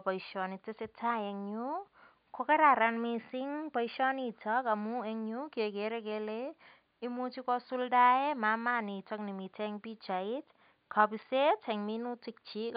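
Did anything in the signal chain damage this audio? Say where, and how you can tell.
No, nothing in the signal chain damaged this speech.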